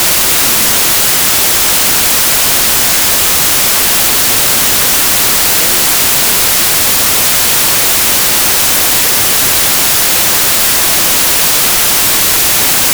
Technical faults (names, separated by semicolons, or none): wrong sample width